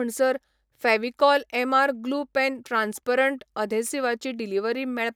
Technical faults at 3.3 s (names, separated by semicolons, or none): none